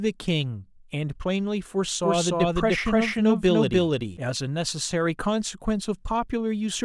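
From 2.03 s to 4.17 s the speech suddenly doubles: a second, equally loud copy trails the first by around 300 ms, full-band and dry, with no decay or room colour, and it switches on and off abruptly at those edges. This is a doubled audio track, likely caused by the same signal reaching the mix twice, once directly and again through a slower capture path, or by an edit holding two copies out of step.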